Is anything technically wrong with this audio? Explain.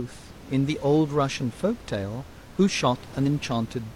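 Yes. There is one fault. From 3.22 to 3.27 s, compressed frames are skipped. About one frame, roughly 40 ms of audio, never plays. The decoder lost or rejected it, so the sound jumps ahead. The faint room noise, about 20 dB below the speech, belongs to the recording.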